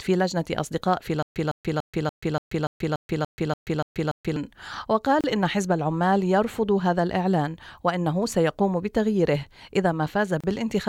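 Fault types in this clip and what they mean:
Stutter with silent gaps: From 1.23 to 4.36 s, one 156 ms burst repeats 11 times. Each burst is followed by 133 ms of digital silence, making a steady 289 ms cycle. Playback likely stalled and replayed its last fragment at each retry. The audio meant for that span is lost.
Gap at a join of encoded pieces: Separately encoded sections were joined with their start delay and end padding left in. The continuous sound drops out for 31 ms at 5.21 s and for 32 ms at 10.4 s. The codec smears the edges. The sound resumes where it stopped.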